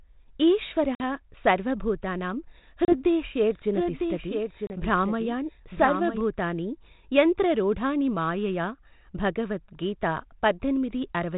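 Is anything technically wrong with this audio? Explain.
Yes, a couple of things. The call runs over G.726 ADPCM, which sounds like the 32 kbit/s DECT rate with only light coding grain and nothing above 4 kHz, but the link itself misbehaves.

Packet loss on the ADPCM call shows up three times: about 50 ms lost around 0.95 to 1.15 s, then roughly 30 ms each around 2.85 to 2.95 s and 4.67 to 4.71 s. Those lengths fit something like five, three and three packets dropped. Each gap is a hard-edged silence, and because the decoder's adaptive predictor and step size lose track of the sender's, the speech comes back slightly distorted before settling a few tens of milliseconds later.

There's also a doubled audio track from 3.43 to 6.21 s. A second full-band copy of the speech trails the original by around a second, about 5 dB quieter, with no decay or room colour to it. It cuts in and out abruptly at both ends. 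That's most likely the same signal being picked up again through a slower path and mixed back in, rather than any real acoustic echo.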